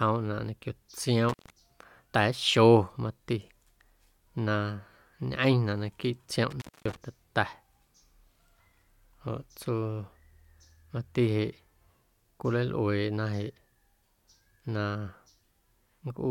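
Intermittent contact at 1.29 s and again at 6.50 s: a loose cable or plug briefly opens the signal path, dropping the speech for about 120 ms and then about 240 ms, with crackle at each break and remake and faint hiss during the gaps.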